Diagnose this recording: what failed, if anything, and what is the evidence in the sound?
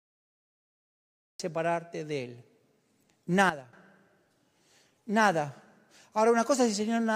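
The recording starts cut off. Digital silence runs from 0.0 s to 1.40 s, then speech begins abruptly mid-sound with no attack. On a waveform, a flat line jumps straight to speech level. A spectrogram shows a hard vertical edge, pointing to capture or storage starting late.

A sudden gain jump occurs between 3.50 s and 3.73 s. Speech and background noise drop together by about 12 dB with no ramp, then return. The waveform shows a step-shaped envelope, and the spectrogram shows a uniformly darker band. The likely cause is a digital gain change in driver or call processing.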